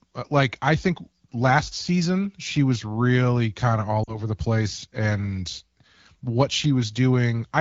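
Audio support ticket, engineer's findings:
Brief drop toward near silence at 4.03–4.21 s, returning weak or rough. Lost AMR speech frames: about 40 ms missing, consistent with two 20 ms frames. The AMR-WB decoder concealed the gap by repeating the last pitch and vocal-tract settings at decaying gain.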